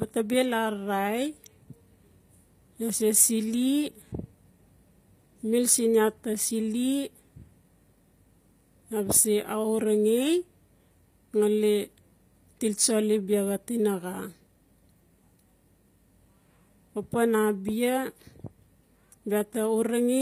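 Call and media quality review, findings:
Speech, full clip: gritty, lispy sibilants and metallic treble, plainly audible; no content above 15.5 kHz. Likely HE-AAC compression, consistent with v2 near 24 kbps. Spectral band replication rebuilds the highs from lower bands, so harmonics misalign across the crossover.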